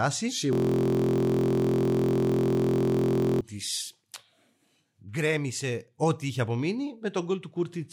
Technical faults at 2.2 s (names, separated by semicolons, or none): system hang loop